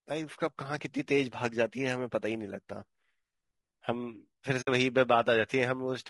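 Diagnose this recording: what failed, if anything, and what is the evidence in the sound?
Codec stage: speech sounds rough and grainy throughout, with noise between harmonics. The likely cause is low-delay AAC compression (AAC-ELD), consistent with about 32 kbps.

Network stage: AAC frame loss with muting from 4.61 to 4.68 s leaves a soft-faded gap, consistent with about 60 ms of zeroed frames.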